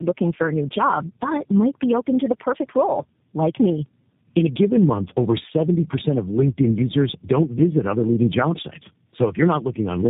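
From start to finish the speech carries tandem speech coding: it passed through three low-rate speech codecs in succession, with the last likely G.729A, each re-encoding the previous one's artefacts. The result sounds rough, muffled and warbly, with nothing above 3.8 kHz.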